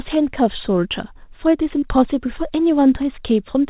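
A short speech recording carried over a narrowband call path, with nothing above 4 kHz, which points to a telephone codec such as G.711, has one short concealed packet loss from 1.79 to 1.85 s. About 30 ms of audio never arrived in time, and the receiver synthesised a replacement by extending the preceding sound before crossfading back. It is heard as a brief smear or wobble.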